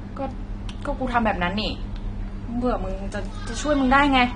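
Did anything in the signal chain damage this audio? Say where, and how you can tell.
Yes, at the codec stage throughout: speech is dull and warbly, and a spectrogram shows nothing above 9.7 kHz, which fits likely AAC compression around 32 kbps.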